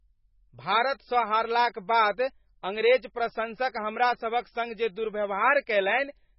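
Throughout the speech, nothing is audible above 5.5 kHz, and the sound has a heavy watery, swirling texture, with sibilants turning chirpy and smeared. This is likely MP3 compression at a starved bitrate, consistent with roughly 16 kbps, where weak frequency lines drop in and out between frames.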